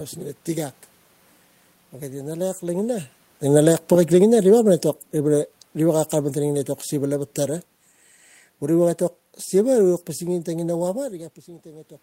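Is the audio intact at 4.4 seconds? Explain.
No. At 4.4 seconds the automatic gain is falling: the gain control judged the input too loud or its background noise too strong and eased its gain down by about 9 dB between 2.64 and 7.33 s, so the speech and the room noise behind it sink together.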